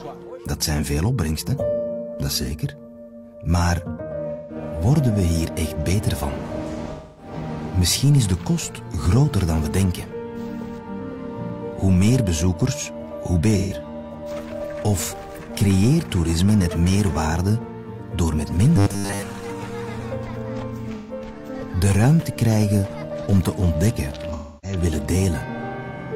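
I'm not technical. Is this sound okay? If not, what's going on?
No. There are two kinds of problem.

At 4.32, 6.92, 13.58, 20.96 and 24.33 seconds, the sound briefly smears into a blurry, noisy patch lasting roughly 0.13 to 0.3 seconds. This is AAC frame loss with concealment: small pieces of the compressed audio went missing, and the player papered over each gap by guessing from what came just before.

From 18.76 to 19.22 seconds, the sound turns into a stiff, metallic, robotic buzz with a steady low hum around 100 Hz. This is robotic sound from repeated short buffers, likely caused by audio arriving too slowly. The player kept replaying tiny slices, roughly 10 milliseconds each, in place of most of the real sound.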